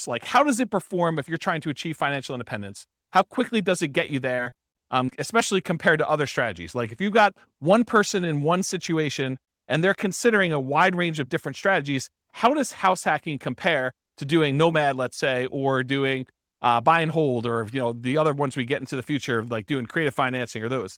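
From 4.35 to 5.13 s, between "does it get you" and "especially compared to other", repeated packet loss (robotic sound) leaves eight short holes, none over 30 ms, each patched by stretching the last sound. It sounds choppy, with pieces missing. A spectrogram shows frozen, smeared harmonics and brief notches.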